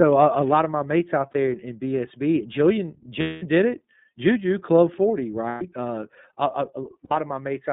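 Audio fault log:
throughout: iLBC codec. The sound is confined to about 150 Hz to 3.7 kHz, with a plainly rough, slightly synthetic edge to the speech. Each frame's excitation is coded independently, which fits iLBC's 30 ms, 13.33 kbps mode. Unlike a wideband codec, nothing above 4 kHz survives.
1.31–1.36 s, 3.21–3.43 s, 5.48–5.64 s, 7.04–7.12 s: lost iLBC frames. The gaps last 30, 210, 120 and 60 ms, and each is filled by a held, buzzy or breathy repeat of the last pitch cycle. The 210 ms gap fades. Normal speech returns right after each gap, with no smeared recovery as in codecs that depend on earlier frames.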